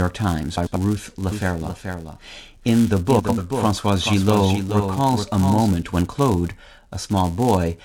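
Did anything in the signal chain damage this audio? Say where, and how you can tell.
Yes. Filter restarted on every block runs through the whole clip: a buzz at 172 Hz tracks the speech level. That rate fits a 256-sample buffer, so a filter at the driver or buffer stage is being reset to silence at each block, leaving a tick every time.

Frames out of order, at 0.57 to 0.76 s and again at 3.19 to 3.38 s: each stretch flutters as two adjacent runs of about 93 ms play in swapped order. This fits runs of four frames reversed in the network or storage path. No time is lost.

Doubled audio track from 1.32 to 5.68 s: a full-band copy about 5 dB quieter trails the speech by roughly 0.4 s. It has no decay or room colour and starts and stops abruptly, likely from a second, slower capture path mixed back in.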